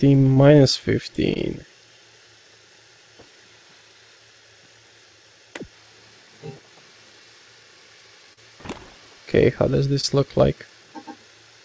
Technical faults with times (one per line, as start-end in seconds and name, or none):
0.34-0.38 short concealed packet loss
1.34-1.37 short concealed packet loss
8.33-8.39 short concealed packet loss
10.01-10.05 short concealed packet loss